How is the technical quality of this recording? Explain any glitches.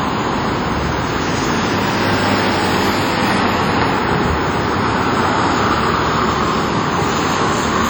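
The quality is poor, with heavy coding damage throughout. The sound rings and smears, with a hiss that breathes along with it. This is likely WMA compression, whose long blocks smear quantisation noise across time. The damage fits a low 32 kbps bitrate.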